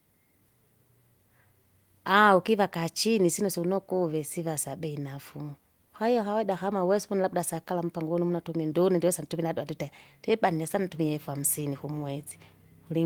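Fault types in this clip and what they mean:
No faults detected in this speech recording.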